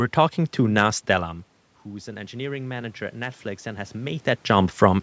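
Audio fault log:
1.85–4.31 s, automatic gain rising: after the input falls by about 16 dB as the talker moves back around 1 s, the gain control slowly adds about 6 dB, so speech and room noise swell together over roughly two and a half seconds.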